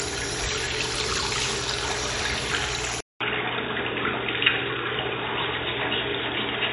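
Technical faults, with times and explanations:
Throughout, MP3 compression: the audio sounds watery and swirly, with nothing above 11.2 kHz, which fits a bitrate around 48 kbps. This is likely lossy encoding short of bits, cutting the treble and switching weak frequency components on and off between frames.
3.0 s to the end, input switched to a poorer device: after a 200 ms gap the sound turns dull and boxy, with nothing above 3.8 kHz and faint new background noise roughly 35 dB down, at much the same level. This is likely a change to a narrower-band microphone.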